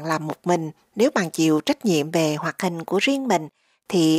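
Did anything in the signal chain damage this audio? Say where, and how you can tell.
Yes. From 2.45 s to 3.63 s the speech plays about 5.3% fast, with pitch raised by 89 cents, just under a semitone, and then snaps back to normal rate and pitch. Speed and pitch moving together point to the driver or buffer stage, likely a drift correction step: clock-matching software briefly changed the playback rate to drain or refill its buffer instead of resampling gradually.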